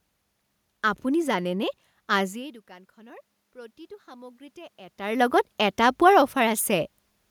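Automatic gain rising, from 2.32 to 5.27 s in this speech clip: after the talker moves away from the microphone around 2 s, the input falls by about 22 dB. The gain control slowly lifts its gain by about 5 dB, so voice and room noise swell together.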